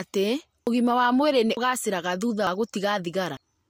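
The speech skips abruptly at 0.67, 1.57, 2.47 and 3.37 s, each losing about a tenth of a second, likely audio missing between 1-second chunks.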